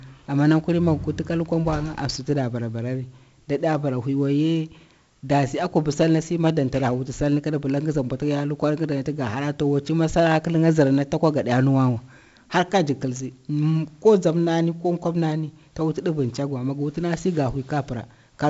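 Throughout, a gritty hiss rides every loud sound and nothing reaches above 7.7 kHz. This is heavy 4-bit ADPCM compression, consistent with a 64 kbps stream.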